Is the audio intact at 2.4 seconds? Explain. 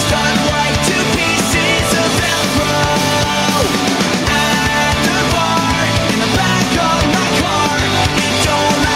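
Yes, at 2.4 seconds the audio runs cleanly, with no dropout, click, distortion or other fault to be heard.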